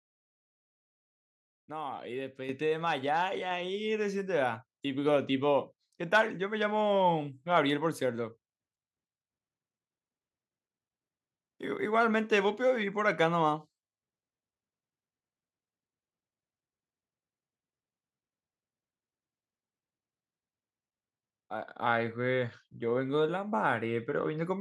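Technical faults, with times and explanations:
2.49 s, microphone volume stepped up: the calling software judged the input too quiet and raised the microphone gain in one jump of about 8 dB, so speech and background noise grow louder together. The waveform's envelope widens abruptly, and the spectrogram brightens evenly across all frequencies.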